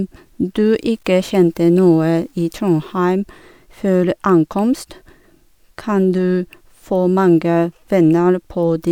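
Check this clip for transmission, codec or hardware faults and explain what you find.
One fault shows up in this speech clip: a stretch of grainy, signal-dependent distortion consistent with low bit depth without dither.

From 0.65 s to 2.98 s, the speech takes on a rough, gritty edge, with error sitting roughly 45 dB below the sound. The likely cause is samples truncated to only a few bits without dither, which fits a 9-bit signal. Each sample is forced onto a coarse step, so the error tracks the waveform. Unlike steady added hiss, this grain rises and falls with the speech rather than persisting as a constant noise floor.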